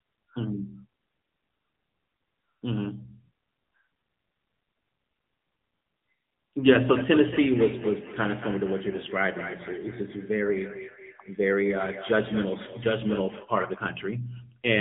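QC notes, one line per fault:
Throughout, AMR narrowband mobile codec. Nothing above about 3.8 kHz survives, leaving speech thin and muffled. Damage is plainly audible: a buzzy, synthetic edge from a coarse vocal-tract model, which fits an AMR-NB mode near 8 kbps.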